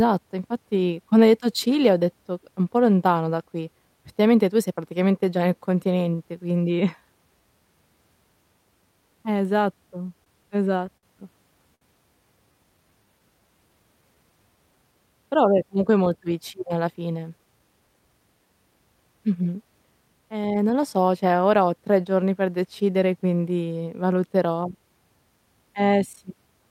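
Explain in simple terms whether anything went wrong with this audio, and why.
Four network timing problems can be heard in this speech, all between 10 and 18 seconds.

From 10.07 to 11.05 s there are repeated stalls, a stutter. The audio was arriving late over the network. Five times the player ran out of sound to play. Each time it held on to the last sound until more arrived. Together those holds add about 105 ms, the longest being 57 ms. Nothing is lost, but the speech catches and drags here.

At 11.75 s there is a short stall from a late packet. One piece of audio came too late. The player stretched the sound it already had for 64 ms, then picked up exactly where it left off. Nothing is skipped. A sound simply hangs on a little too long, with a faint buzz or dip.

From 12.52 to 14.93 s a jitter buffer slow-down is audible. The player needed to build up its small store of waiting audio. 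To do that, the player repeated tiny slices of the speech many times over. That adds about 175 ms. The speech plays at about 93% of normal speed. The pitch stays the same, but sounds feel drawn out.

From 16.8 to 18.09 s, just after "comunque è molto vicina", there is a jitter buffer speed-up. The player's store held more audio than it aims for. To catch up, the player cut out many tiny slices, about a fifth of a second in total. The speech runs at about 114% of normal speed. The pitch doesn't change, but the talking sounds rushed.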